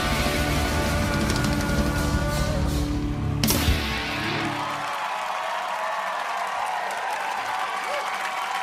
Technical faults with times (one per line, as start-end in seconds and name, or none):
1.34 compressed frames skipped
2.66 compressed frames skipped
4.07 compressed frames skipped
7.03 compressed frames skipped